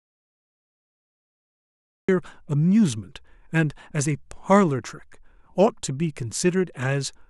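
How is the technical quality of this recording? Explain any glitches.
The recording has one glitch at the very start. Audio dropout to silence, 0.00 to 2.09 s: the clip opens in silence with no room tone, likely because the input was lost while recording continued, before speech abruptly begins.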